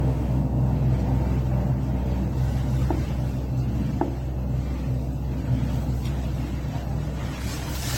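From start to finish the sound is swirly, smeared and hollow, with blurred attacks, likely from generation loss: repeated lossy re-encoding, which fits about three AAC passes, each stacking new quantisation noise. A spectrogram shows nothing above 16.6 kHz.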